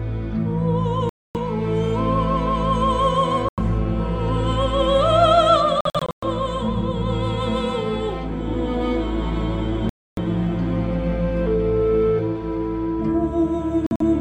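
Bluetooth dropouts at 1.09–1.37 s, 3.49–3.59 s, 5.81–6.24 s, 9.89–10.19 s and 13.86–14.02 s cut the sound to sudden silence, likely because wireless packets arrived too late and were discarded. The gaps last roughly 90 to 280 ms, which fits losing several packets of about 23 ms each. The third and fifth gaps are broken into scattered holes. After each gap the sound resumes further on, as though it had kept playing.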